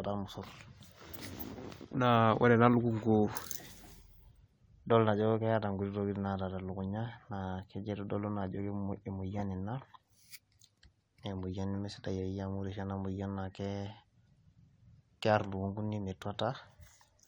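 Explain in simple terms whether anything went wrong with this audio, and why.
Four short chirps or blips cut into the speech, at 1.39 to 1.43, 9.38 to 9.41, 13.88 to 13.90 and 15.44 seconds. Each is a corrupt frame decoded: damaged compressed data was played anyway, briefly putting sound at the wrong pitches.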